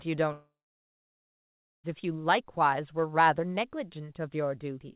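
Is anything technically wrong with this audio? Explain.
Yes. A long network dropout from 0.32 to 1.87 s likely stopped audio arriving: a brief fading buzz or hiss, then about 1.3 s of silence, and speech resumes with that stretch lost.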